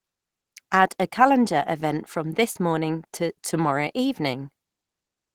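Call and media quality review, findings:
Short concealed packet loss, 2.51–2.57 s, between "a calendar event from" and "morning to tomorrow". Symptom: brief smear and wobble, as if the sound briefly stalls. Probable component: receive-side jitter buffer and decoder concealment. Mechanism: about 40 ms of audio lost in transit. Decoder extended the preceding sound for about 35 ms, then crossfaded back into received audio.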